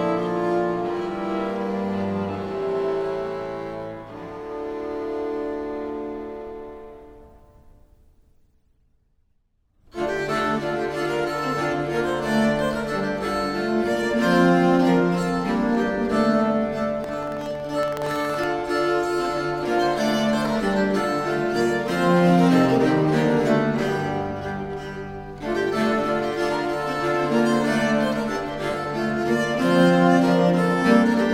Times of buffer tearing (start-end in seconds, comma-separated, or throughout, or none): 17.00-18.47